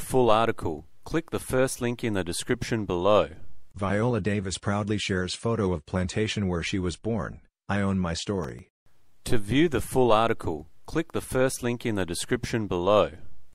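From 8.43 to 8.99 s the audio breaks into gritty processor overload crackle: about ten very short buffers miss their deadline and replay stale audio with hard edges.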